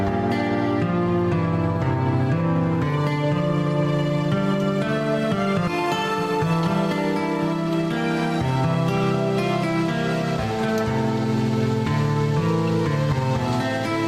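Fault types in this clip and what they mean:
Skip ahead: around 5.67 s playback jumps forward, dropping roughly 0.4 s of sound that was already queued, and the two sides are butted together with no gap at all. It sounds like an abrupt lurch, with a chunk simply missing.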